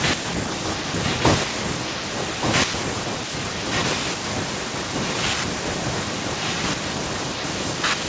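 From 0.54 to 5.22 s a second copy of the speech trails the original by about 1.18 s, only a little quieter, and from 5.45 s to the end it continues more faintly. This is an echo leak, likely from a far end on loudspeaker whose echo canceller let its microphone's pickup return. On a spectrogram, which stops at 8 kHz, the speech's harmonic pattern reappears 1.18 s later; the waveform shows matching, smaller envelopes at that offset.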